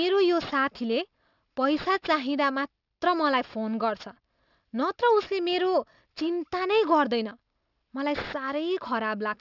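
Aliasing runs throughout: content above 6 kHz folds back unfiltered, fitting a drop to 12 kHz sampling, leaving sibilants gritty and metallic, with the folded energy about 20 dB below the signal.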